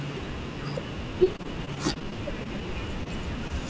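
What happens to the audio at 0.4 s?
Nothing goes wrong at 0.4 s: the speech passes through intact, carried as normal by the wideband call path with its usual limit of nothing above 8 kHz.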